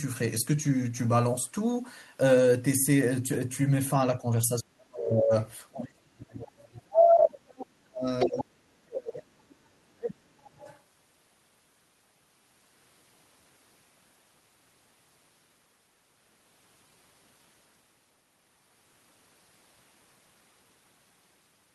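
From 4.19 to 4.26 s, then 4.48 to 5.33 s, 5.71 to 8.07 s, 8.25 to 9.28 s and 9.81 to 10.64 s, the speech is pulled down, shallowly at first and then by about 35 to 40 dB, dropping almost out. This is likely speech suppressed in double talk: with both sides talking, the echo canceller attenuated the near talker along with the echo.

The other side's voice leaking through likely appears at 8.19 to 8.44 s, only about 5 dB under the speech, then as faint scraps at 9.49 to 9.55 s and 10.63 to 10.79 s. This is residual loudspeaker echo that the canceller left in the microphone signal.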